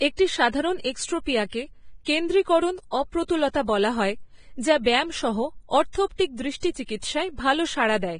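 Throughout the speech, Vorbis compression is the likely cause of a hissy, grainy texture and blurred consonants. Nothing passes above 9.7 kHz, and the treble detail is replaced by noise, which fits a low bitrate of around 22 kbps. Simple band-limiting would dull the sound without adding that granular roughness.

From 6.60 to 6.63 s, pre-echo puts a short hiss about 31 ms ahead of a sharp attack. The codec spreads the quantisation noise meant for the loud onset across the whole transform block, into the quiet moment before it. Unlike reverb, the smear comes before the attack, not after it.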